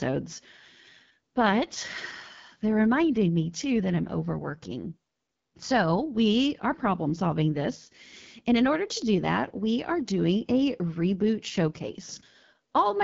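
Throughout, the speech passes through the AMR wideband (HD Voice) codec at a low rate, consistent with 8.85 kbit/s. Its pulse-driven vocal tract model is starved of bits, so voices turn plainly rough and raspy, and nothing is present above 7.5 kHz.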